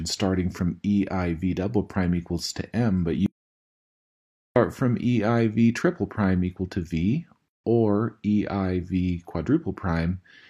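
At 3.26 s the sound cuts off mid-flow and returns at 4.56 s. This is an audio dropout to silence lasting about 1.3 s, and whatever was happening in that stretch is lost. The gap is silent with no room tone. On a waveform it is a flat line, and on a spectrogram it is a clean black band across all frequencies. The likely cause is a brief loss of input, such as a disconnected device, a failed link or an accidental mute, while the recorder kept writing silence. A second, shorter hole opens at 7.48 s and closes at 7.64 s, a 158 ms gap at a join of encoded pieces. Separately encoded segments were spliced without trimming, so one segment's end-frame padding and the next segment's encoder start-up delay both remain as silence. The sound then resumes where it left off. Visually it is a narrow vertical gap with soft, smeared edges from the codec rather than a razor-sharp cut.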